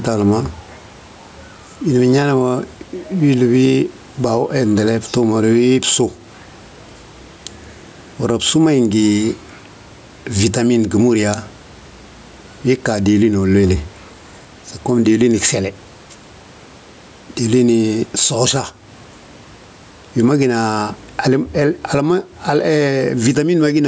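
Throughout the speech, the gain swings by around 10 dB, so loud and soft passages sit squashed together. This gain pumping likely comes from microphone gain set far too high, with a fast limiter repeatedly pulling it down.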